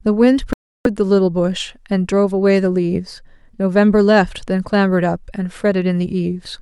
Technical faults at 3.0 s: none

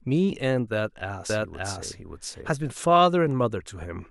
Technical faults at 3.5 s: none

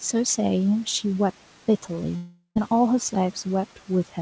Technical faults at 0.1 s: none

